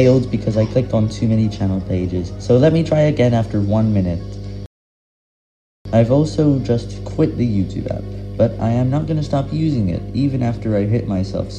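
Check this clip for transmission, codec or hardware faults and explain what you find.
Two faults stand out: a constant mains hum and one playback stall.

Mains hum runs through the whole clip, a steady 50 Hz tone sitting only about 10 dB below the sound, from power-line coupling through a ground loop or nearby transformer.

A playback stall from 4.66 to 5.85 s cuts the sound dead for about 1.19 s before it resumes, likely because the player ran short of data or its thread was blocked.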